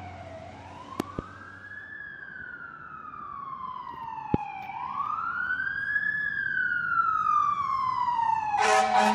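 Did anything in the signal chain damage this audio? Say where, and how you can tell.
Yes. There are loud pops, and they most likely come from the analogue wiring or a driver glitch, where a sudden voltage step from a plug, switch or static discharge entered the chain. A double pop runs from 1.00 to 1.21 s, and a single one from 4.34 to 4.36 s, each peaking about 20 dB above the signal. Unlike a dropout or buffer glitch, the sound carries on unbroken underneath. The pulse is simply added on top, shaped by the circuits after it.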